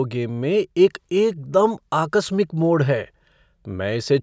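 Nothing technically wrong can be heard anywhere in the signal of this speech recording.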